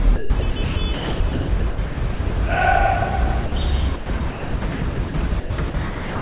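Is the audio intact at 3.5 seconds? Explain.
No. From 3.46 to 3.52 s, about 60 ms of the sound is missing and replaced by a flat, steady noise floor before the material resumes. This points to sound dropped by the voice detector: the sending side most likely judged that stretch to be background, stopped transmitting, and the receiver filled the gap with generated comfort noise until detection triggered again. The surrounding audio, carried over a G.711 call path, has nothing above 4 kHz.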